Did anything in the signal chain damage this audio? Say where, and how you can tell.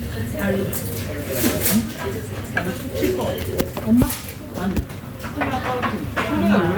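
No, I can hear no damage at any stage of the chain in this recording of sounds.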